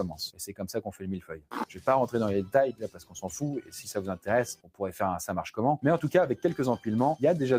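A speech-tuned noise suppressor applied to music or sounds pumps the level by roughly ten decibels throughout, visible as a fluttering waveform envelope and patchy, gated spectrogram energy. Sound cut by the noise suppressor sinks at 1.2–1.87 s (about 17 dB), 2.72–3.19 s (about 15 dB) and 4.55–4.81 s (about 16 dB), each showing as a dark spectrogram gap and collapsed waveform.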